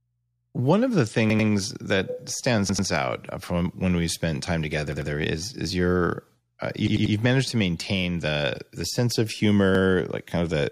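Speech with five repeated buffer stutters, at 1.30, 2.69, 4.92, 6.87 and 9.75 s. Each time a chunk of about 93 ms replays with a hard join: twice at the first three, three times at 6.87 s, once at 9.75 s. Late-arriving audio made the device reuse its last buffer, which fits a 4096-sample buffer.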